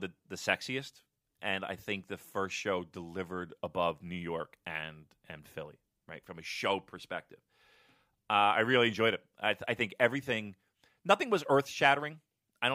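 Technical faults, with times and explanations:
No technical faults can be heard in this speech clip.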